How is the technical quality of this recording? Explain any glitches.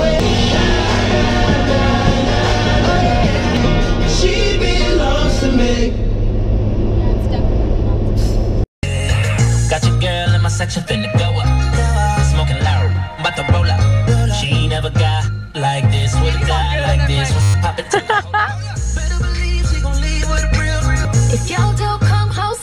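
One glitch mars the recording. From 17.42 to 17.54 s there is a system hang loop. The system froze while the sound hardware kept replaying the same 10 ms slice of its ring buffer. That slice repeats twelve times, so about a tenth of a second of real audio is lost. Such a short loop is heard as a steady buzz at 100 Hz.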